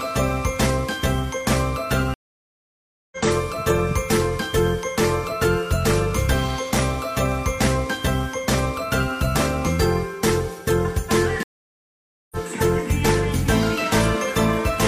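Two stream reconnects break this audio: the connection dropped and a fresh decoder restarted mid-stream, leaving silences of 0.98 s at 2.14 s and 0.88 s at 11.43 s, after which it resumes roughly a second and about 0.7 s further on.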